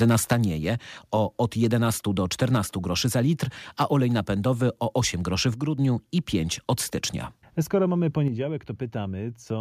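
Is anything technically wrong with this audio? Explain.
Yes. Three kinds of fault are audible.

Microphone overload, at 0.01–0.33 s (about 5 dB over, roughly 4% of samples), 1.44–1.65 s and 3.8–3.97 s (about 2 dB over, under 1%). The last comes between "groszy za litr" and "napędowy o". The likely cause is input volume driving the converter past its limit, which cuts off waveform tops. The result is a crackling edge, with flat-topped peaks and broadband smearing on a spectrogram.

Microphone volume stepped down, at 0.33 s (about 4 dB) and 8.28 s (about 6 dB). The likely cause is call software cutting input volume in one step. Voice and background drop together, visible as an abrupt waveform envelope step.

Sudden gain jump, at 5.54–5.78 s, just after "groszy w". Level falls about 6 dB with no ramp, likely from a digital gain change applied between samples. It appears as a vertical edge in the waveform envelope and a uniform spectrogram darkening.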